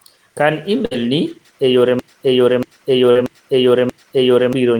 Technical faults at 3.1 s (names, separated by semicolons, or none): broken-record loop; short concealed packet loss